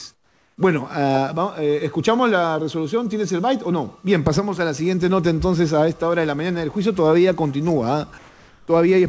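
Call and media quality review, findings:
Background detail drops out at 0.14 to 0.58 s, replaced by flat, steady hiss about 6 dB quieter. Likely comfort noise in place of the background: sender stops transmitting in the pause, receiver synthesises shaped noise.

Same at 8.18 to 8.68 s: texture gone, level almost unchanged (about 1 dB down), noise uniform until sound resumes.

Nothing above 8 kHz throughout, consistent with the G.722 call path.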